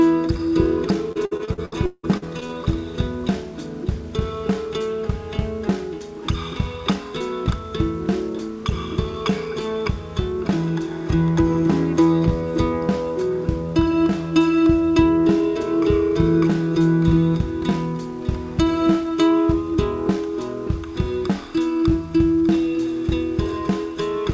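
From 1.12 to 2.51 s, repeated packet loss (robotic sound) chops the audio: about ten gaps, longest 174 ms, patched by stretching prior sound. It turns choppy.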